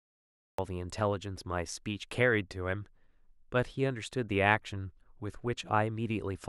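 The first 0.58 s is dead digital silence, then the speech drops in mid-sound at 0.58 s with no natural attack or fade. That's a cut-off start: capture or streaming kicked in late, so the opening of whatever was being said simply never got recorded.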